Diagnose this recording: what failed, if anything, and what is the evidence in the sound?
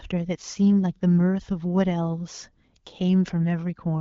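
Nothing in this speech recording stood out on listening as a failure at any stage.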